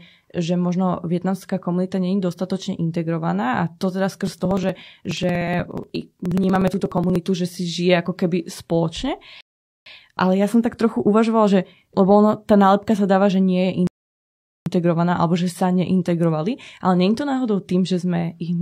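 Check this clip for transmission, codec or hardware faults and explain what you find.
Two kinds of fault are present: a stretch of periodic dropouts and two playback stalls.

From 4.15 to 7.16 s, just before "že si žije", there are periodic USB or driver dropouts. Something blocked the audio path every 60 ms, and each time roughly 4 ms of audio was skipped, about fifty times in all. The speech picks up a steady, rapid ticking as each gap splices the waveform together.

At 9.41 to 9.86 s, after "keby spoločne", a rebuffering stall occurs. The player ran out of downloaded audio and waited for more. The speech halts into silence for about 0.45 s and then continues exactly where it stopped, with nothing lost.

A second rebuffering stall runs from 13.87 to 14.66 s, between "dáva že nie je" and "alebo že sa neintegrovali". Playback again waited on the buffer, inserting about 0.79 s of silence before the speech resumes seamlessly.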